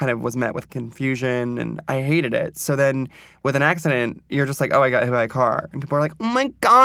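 Listening to the speech in this clip, nothing stood out as a technical problem.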